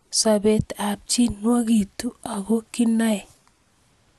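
Speech with MP2 compression damage throughout: dull, gurgling and granular, with nothing above 12.2 kHz. A spectrogram would show a hard ceiling there and upper sub-bands flickering on and off, likely from Layer II starving bands of bits, which fits a rate near 80 kbps.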